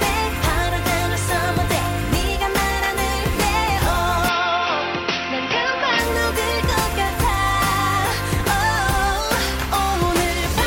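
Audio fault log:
4.29–6.00 s, input switched to a poorer device (likely): sound dulls abruptly with nothing above 5.9 kHz, a faint new noise floor appears, level stays steady, no gap.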